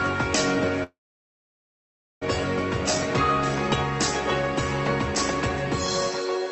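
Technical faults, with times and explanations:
0.83–2.23 s, call audio freeze: likely delayed packets emptied the jitter buffer, giving a short fading tail, then 1.28 s of silence, before the sound resumes intact.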